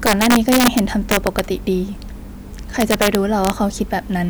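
From 0.06 to 1.39 s and 2.81 to 3.50 s, integer overflow wraps speech peaks, about 4 dB and 2 dB too hot, to the opposite sign. The result is violent cracks, harsher than clipping's flattened tops.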